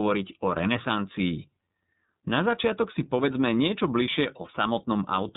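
Throughout, the speech passes through the iLBC codec, coding each frame independently and cutting everything above 4 kHz, leaving it narrowband, rough and a little synthetic-sounding.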